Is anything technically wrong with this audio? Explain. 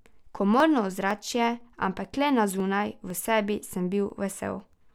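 Yes. From 0.10 s to 4.60 s the speech has periodic USB or driver dropouts, repeating every 0.5 s. Each time, roughly half a millisecond of audio is skipped as the bus or driver stalls. The result is a regular tick, about ten of them, heard only under the voice.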